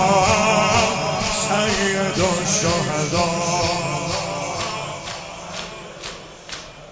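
No technical fault can be heard anywhere in the recording, and the signal stays steady and intact throughout.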